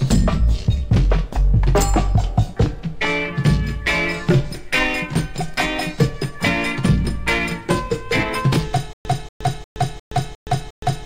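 A playback stall likely sets in at 8.93 s. The player or stream stops getting fresh data, and on each retry it replays the last fragment it still holds before running dry. The result is a stutter with silent gaps that lasts to the end. The same 235 ms burst returns six times at a steady 355 ms pace, each repeat followed by 119 ms of dead digital silence. Whatever should have played after 8.93 s never arrives.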